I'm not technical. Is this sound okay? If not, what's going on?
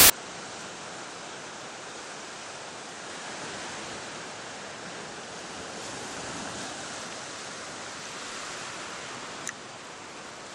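No. For the first tenth of a second, from 0 to 0.1 s, there's a short, very loud hiss before the real audio begins. This is file tags played as audio. Part of the file's stored information, here the embedded cover picture, is being played as if it were sound. A picture stored as data sounds like flat, very loud static. Unlike a click or a dropout, it's a solid block of noise with abrupt start and stop edges.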